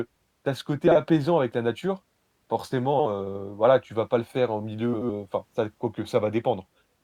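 Speech with three brief garbled flutters: 0.87 to 0.96 s, between "tu as ce" and "avec la nature"; 2.94 to 3.06 s, just before "heu voilà tu vas"; and 4.94 to 5.12 s, between "le faire en milieu" and "enfin ça dép quoique". These are frames out of order. Two adjacent blocks of about 40, 60 and 80 ms respectively were swapped and decoded that way. Each stretch plays with its halves exchanged, with no time lost.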